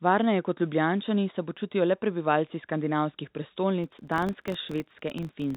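Right after "počutijo le prebivalci skandinavskih", from 3.84 s to the end, a filter restarted on every block ticks into a roughly 47 Hz buzz, which fits a 1024-sample buffer.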